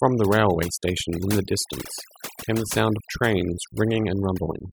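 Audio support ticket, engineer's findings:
Background near-silent with twinkling specks throughout. Overdone noise removal: suppressor set too strong, gating bands near its noise estimate, taking quiet speech detail with them.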